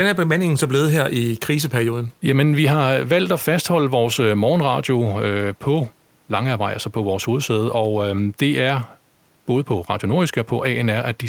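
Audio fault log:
No faults detected in this speech recording.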